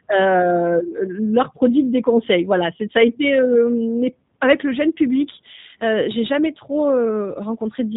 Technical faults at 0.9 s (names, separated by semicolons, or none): G.729 codec